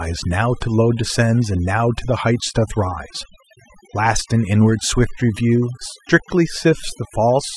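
Overdone noise removal runs through the whole speech clip. A noise reduction stage set far too aggressively pulls individual frequency bands down whenever they sit near its noise estimate, so the background in pauses drops and breaks up into twinkling specks, and quieter parts of the voice vanish.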